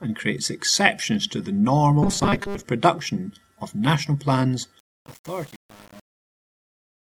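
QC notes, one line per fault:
2.03–2.65 s, robotic sound from repeated short buffers: the sound takes on a rigid, metallic 200 Hz buzz. New audio likely arrived too slowly, so about half of this stretch was filled by looping the last 5 ms, which forced that fixed pitch while real audio was skipped.
4.79–7.03 s, truncation distortion on a fade: as the fade-out starting around 4.8 s drops toward silence, the tail turns gritty. The level stage keeps too few bits, pointing to about 7, with no dither, so the quiet waveform collapses into coarse square steps.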